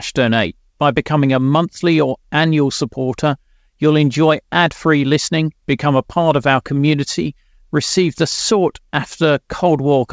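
No technical faults can be heard in this speech; it has arrived over a call link, and the band stops at 8 kHz in the way a wideband codec such as G.722 leaves it.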